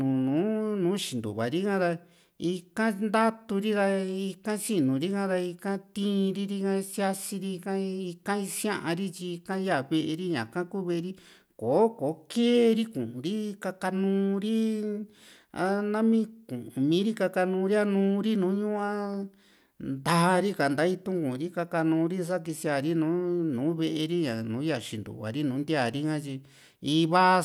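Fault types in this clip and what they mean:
No fault types are present in this clip.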